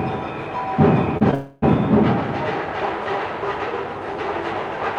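At 1.17 to 1.23 s and again at 1.31 to 1.34 s, short concealed packet loss leaves brief smears where about 40 ms and 20 ms of audio went missing and were patched from the preceding sound. From 1.34 to 1.64 s the sound becomes a fading continuation of what came before, never dropping to silence, then resumes further on. This is likely a long network dropout, set apart by its length and by real content being skipped rather than briefly smeared.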